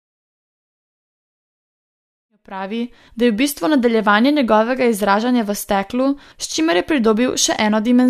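No technical faults can be heard in the speech recording. A smooth fade-in begins at about two and a half seconds and reaches full level at 3.1 s, rising evenly with no click or hard edge.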